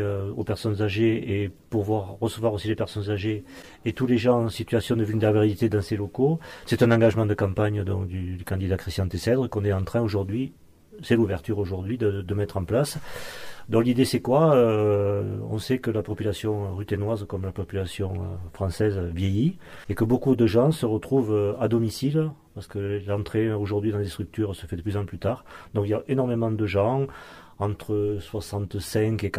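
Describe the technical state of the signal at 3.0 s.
At 3.0 s the signal is intact, with no audible dropout, distortion, glitch or other technical fault at that point.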